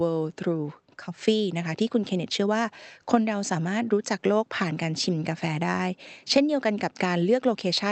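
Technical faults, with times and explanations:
Nothing in this speech recording counts as a technical fault.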